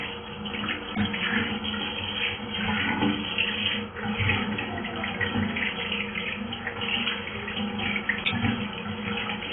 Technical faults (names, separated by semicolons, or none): AAC compression